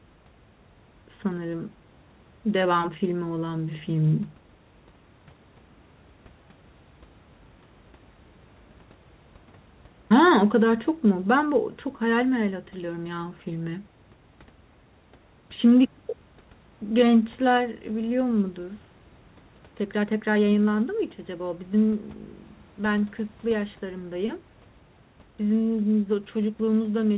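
No technical faults can be heard anywhere in the recording. The speech carries the narrowband character of a telephone-grade call path, likely G.711 mu-law, with nothing above 4 kHz, and a faint room noise sits about 34 dB below the speech.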